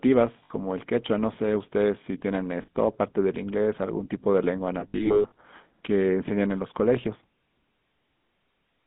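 From start to finish, the speech has the GSM full-rate codec's buzzy, gravelly roughness, and the damage is plainly audible. The codec rebuilds the voice from a vocal-tract model driven by a sparse pulse train. That leaves a grainy, reedy edge on every voiced sound. The line passes only about 150 Hz to 3.6 kHz, so the sound is thin and muffled. This fits the 13 kbps GSM full-rate codec.

At 0.44 s and again at 2.62 s, there are lost GSM frames, each gap about 60 ms long. The decoder fills each gap by repeating the last good frame. Each one sounds like a brief rough, metallic ring. From 4.8 to 5.32 s, losses are scattered across about half a second, about 320 ms missing in all. The longest run lasts about a tenth of a second. Here the sound rings metallically.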